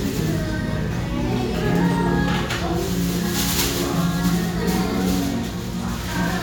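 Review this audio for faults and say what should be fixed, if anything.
Nothing in this recording needs fixing, as no technical faults can be heard anywhere in it. No change to how it was captured or played back is called for.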